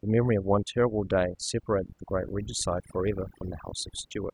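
A short speech recording suffers from overdone noise removal throughout. The background drops, dotted with twinkling specks. A noise reducer set too hard is gating individual frequency bands near its noise estimate, and quiet voice detail disappears with them.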